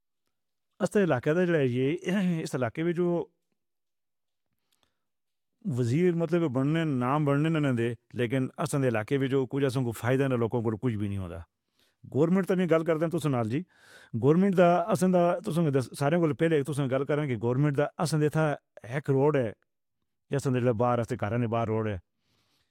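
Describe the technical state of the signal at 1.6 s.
At 1.6 s the speech signal is intact, with no audible dropout, distortion, clipping or other technical fault at that point.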